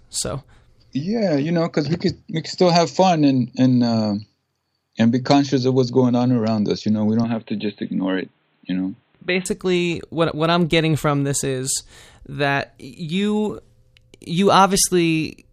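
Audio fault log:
7.24–9.46 s, input switched to a poorer device: right after "know we" the speech turns dull and boxy, with nothing above 4.1 kHz and a faint new noise floor well under the voice. There's no gap or level jump, likely a seamless swap to a narrower-band mic.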